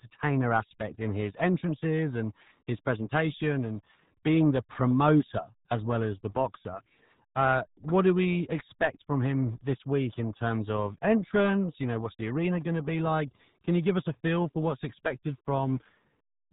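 A RealAudio 14.4 codec runs throughout this speech clip, with heavy codec damage: nothing above 3.8 kHz survives, leaving muffled, gargly speech that fits an 8 kbit/s dial-up speech coder.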